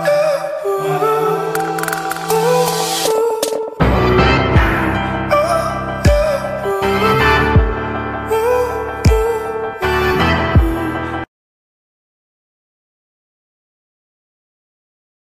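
No technical faults are audible.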